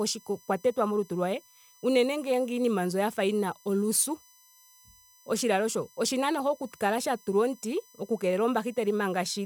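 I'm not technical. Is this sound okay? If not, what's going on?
No, not quite. Underneath the speech, for the whole clip, there's a thin, steady high-pitched whine. That's USB whine: the USB connection pulls power in regular bursts a thousand times a second, and that rhythm leaks electrically into the audio as a fixed tone at 1 kHz and its multiples. Here the sharpest, most noticeable part sits up around 6 kHz. It's fairly quiet next to the voice.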